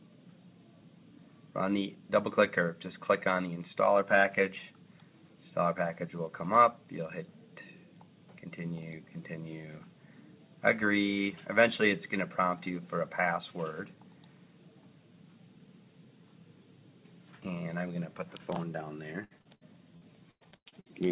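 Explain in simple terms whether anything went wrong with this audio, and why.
Yes, something did go wrong, right near the end. From about 19.24 to 20.92 s there's repeated packet loss, the robotic sound you get on a shaky call. Bits of audio kept arriving late or not at all, roughly a dozen times in under two seconds, with the longest hole about 98 ms. Each time, the system papered over the gap by stretching the last bit of sound, so about a third of that stretch is filler. That's why it turns choppy. The muffled, phone-like tone throughout, with nothing above 4 kHz, is just the call line working as normal.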